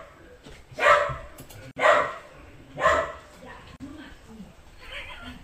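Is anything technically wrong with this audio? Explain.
Yes. There is a gap at a join of encoded pieces at 1.71 to 1.76 s (about 51 ms) and at 3.76 to 3.80 s (about 38 ms), matching pieces of roughly 2 s encoded separately. Each join keeps the encoder's start-up delay and last-frame padding, so continuous sound drops into silence with smeared edges, then resumes where it left off.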